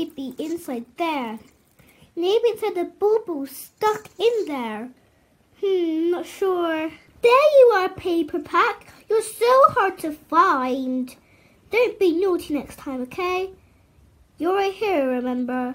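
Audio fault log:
Nothing stood out on listening to this recording.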